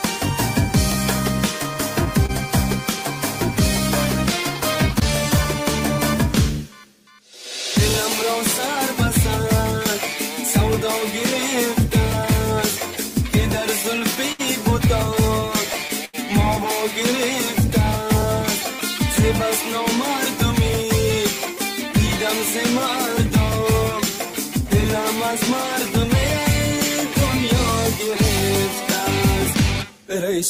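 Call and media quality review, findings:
Scattered short gaps, 1.63–2.31 s: about three brief ticks or smears, longest around 30 ms. Network loss or late packets, each patched by extending the last sound. Isolated holes, no dragging, unlike the stutter at 13.83 s.

Repeated stalls (stutter), 13.83–16.15 s: eight gaps totalling 219 ms, longest 85 ms, with the longer ones faded. The jitter buffer repeatedly ran empty on slow packet arrival. Nothing is lost, but the audio drags, unlike the isolated patches at 1.63 s.

Jitter buffer speed-up, 27.99–30.39 s: the audio runs at 103% with pitch unchanged. An overfull jitter buffer trimmed pitch-period slices, roughly 70 ms in total, to cut delay. The pitch holds steady and no gaps are heard, which separates it from the two stall-type faults.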